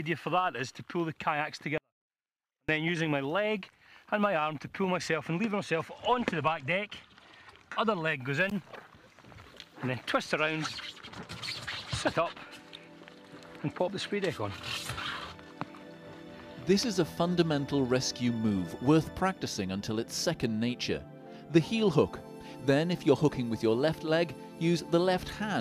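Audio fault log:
1.78 to 2.69 s, 24-bit alignment error (too quiet): the level drops by about 48 dB, nearly to silence, yet the sound stays clean, with abrupt level changes at both edges, because 24-bit samples sitting in the low bytes of 32-bit words were read as full 32-bit integers.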